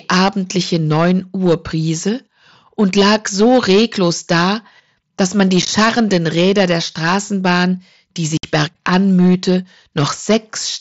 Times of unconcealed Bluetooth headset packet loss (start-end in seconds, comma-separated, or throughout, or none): 5.62-5.68, 8.37-8.44